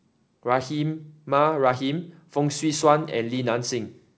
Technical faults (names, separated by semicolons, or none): none